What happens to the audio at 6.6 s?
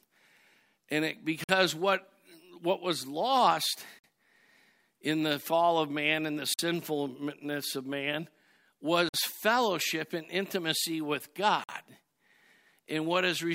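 Right after "of man and the", the speech drops out from 6.54 to 6.59 s. It is a gap between chunks. The audio was delivered in pieces of roughly 2.5 s, and a 50 ms stretch of silence sits at the join. Nothing is lost from the speech itself. It simply stops and resumes. It sounds like a brief hole in the speech.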